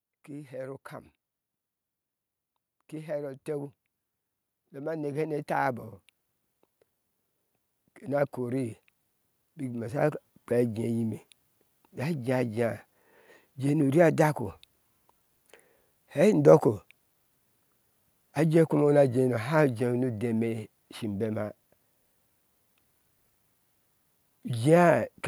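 A speech recording with two stretches of automatic gain rising, from 2.9 to 5.87 s and again from 8.01 to 12.1 s. Each time the AGC decides the input's too quiet and slowly pushes its gain up, by about 9 dB and then about 8 dB, so the voice and background swell together over a few seconds.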